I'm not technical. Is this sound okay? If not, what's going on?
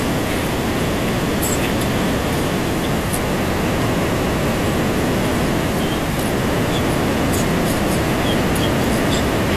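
Yes, no faults here.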